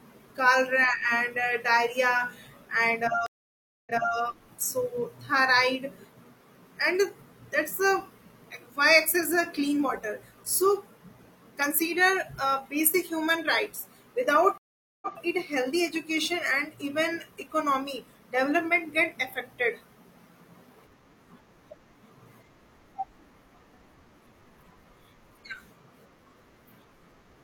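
Speech with two stream reconnects: after "diarrhea and" at 3.26 s, about 0.6 s of silence, then audio resumes 0.3 s earlier; at 14.58 s, 0.44 s of silence, resuming 0.13 s earlier. Spectrograms show blank gaps followed by repeated material, as a server resent buffered audio to a fresh decoder.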